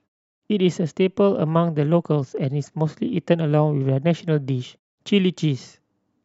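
A speech recording, with nothing technically wrong with it.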